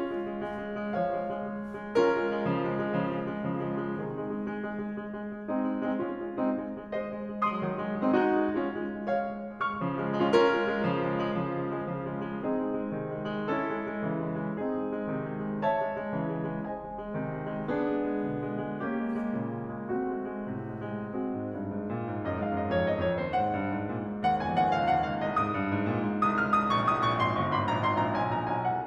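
Listening to this music recording, nothing technically amiss stood out.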